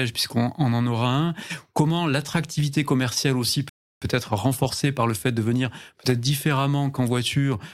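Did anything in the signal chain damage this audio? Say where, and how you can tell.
Yes: a rebuffering stall at playback, 3.69 to 4.02 s. The speech drops to silence for 0.32 s and resumes exactly where it stopped: the player starved of data, adding time without losing audio.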